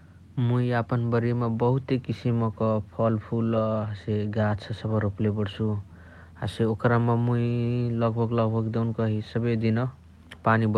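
No dropouts, clicks, distortion or other transmission faults turn up anywhere in this speech recording.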